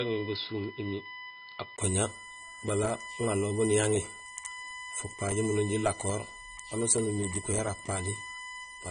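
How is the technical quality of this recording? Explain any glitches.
The recording has three clear technical problems: a steady whine, a dulled top end throughout, and a poorer-sounding opening.

USB whine, throughout: USB frame timing leaks into the power or ground, giving a fixed 1 kHz tone, strongest at 2 kHz, roughly 15 dB below the speech.

Transcoding between lossy codecs, throughout: nothing survives above 9.8 kHz, and the mixed artefacts of both codecs likely come from a low-rate AAC pass re-encoded to Vorbis.

Input switched to a poorer device, 0 to 1.78 s: the speech is boxier, cut off above 5.2 kHz, about 5 dB quieter and noisier, likely another input, then clears after a 20 ms gap.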